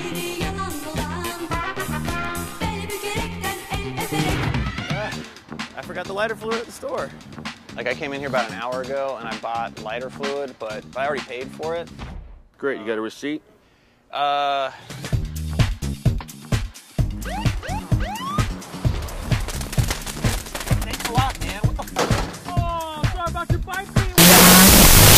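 From 24.18 to 25.17 s, loud noise swamps the audio, half speed and an octave low: a wrong sample width, consistent with 16-bit samples read as unsigned 8-bit.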